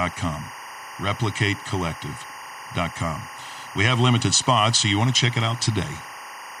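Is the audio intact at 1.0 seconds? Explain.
No. Timecode bleed runs through the whole clip, including 1.0 s: linear timecode at 23.976 frames per second leaks in from a neighbouring line, a square wave flipping between tones near 1 kHz and 2 kHz, roughly 15 dB below the speech. It's heard as a steady chirping warble, and a spectrogram shows persistent bands near 1 kHz and 2 kHz with harmonics above them.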